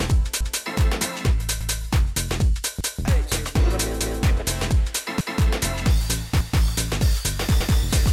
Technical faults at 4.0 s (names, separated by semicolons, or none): overlapping chunks